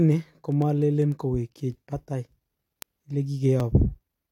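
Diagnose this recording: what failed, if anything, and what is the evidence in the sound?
Word clock ticks run from 0.12 s to 4.31 s, sharp ticks of uneven strength roughly every tenth of a second through the speech, about forty in all. At the digital interface, the receiver free-runs about 200 ppm off the sender, so each slip drops or repeats one sample.

Overlap between stream segments at 3.60 s causes a tiny skip where the waveform jumps. At playback, the time stamps of adjoining 1.0 s segments overlapped, and the player trimmed the overlap, discarding a few milliseconds of speech that had never actually been doubled.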